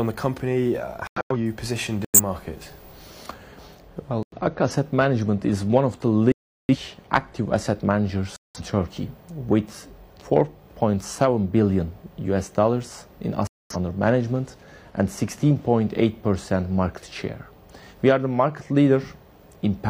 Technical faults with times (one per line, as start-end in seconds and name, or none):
1.06-1.36 corrupt frame muted
2.05-2.20 corrupt frame muted
4.23-4.37 corrupt frame muted
6.32-6.76 corrupt frame muted
8.36-8.61 corrupt frame muted
13.47-13.76 corrupt frame muted